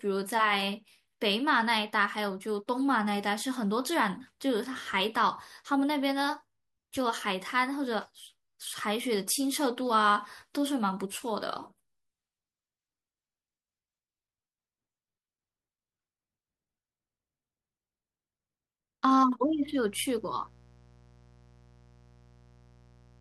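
From 19.44 s to the end, mains buzz appears: switching spikes from 60 Hz power add a raspy harmonic comb, visible on a spectrogram as evenly spaced horizontal lines, at a fairly low level.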